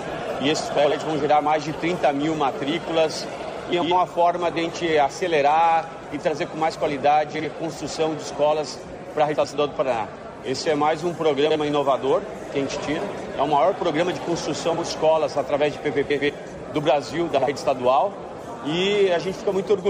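Frames out of order occur at 0.77–0.92 s, 3.72–3.92 s, 7.34–7.45 s, 9.34–9.54 s, 11.46–11.56 s, 14.73–14.84 s, 16.10–16.30 s and 17.38–17.48 s. In each, two adjacent blocks of about 46, 70 or 93 ms were decoded with their order swapped, consistent with runs of two to four frames. Each stretch plays as a brief garbled flutter, and no time is lost.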